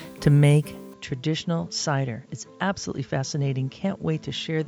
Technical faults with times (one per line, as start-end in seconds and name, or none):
0.94-4.68 input switched to a poorer device